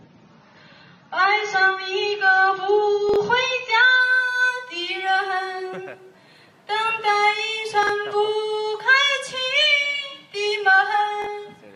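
Adaptive stream starting at a low bitrate, from 0.0 to 4.0 s: the player opens on a lean version of the stream so playback begins quickly, then switches up once it has gauged the connection. Until the switch, nothing is present above 6.9 kHz, so the top end sounds dull and the coding artefacts are more exposed. The character fits an AAC stream at around 24 kbit/s stepping up to about 96 kbit/s. At 4.0 s the treble returns abruptly, with no break in the sound.

Chunks out of order occur at 3.09 to 3.16 s, 7.83 to 7.89 s and 11.22 to 11.26 s. At each point, a 21.33 ms block of audio was delivered or written late and plays after material that should have followed it. In the first two it arrives about 43 ms late, and in the last about 21 ms late. Nothing is lost, but the shuffled order leaves hard joins between blocks, heard as a brief jumbled stutter.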